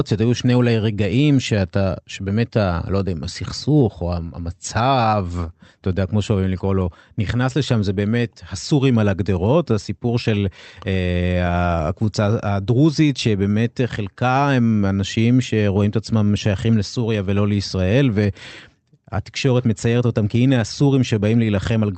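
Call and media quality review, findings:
Clock drift between sender and receiver: sender clock runs about 2% slow, so the jitter buffer keeps draining and the receiver has to pad the stream. Small hiccups all the way through.

Repeated timing corrections, 0.28 to 21.73 s: short pieces repeated unevenly, all stretching. Playback at 98% speed, adding roughly 0.4 s in total.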